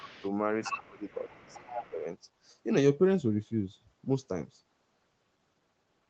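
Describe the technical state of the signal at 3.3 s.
At 3.3 s the speech is intact, with no dropout, click or distortion, just the normal call path that keeps nothing above about 8 kHz.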